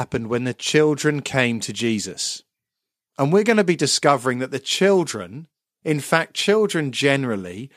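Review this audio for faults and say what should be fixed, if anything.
Nothing here needs fixing; the speech comes through without any technical faults worth pointing to.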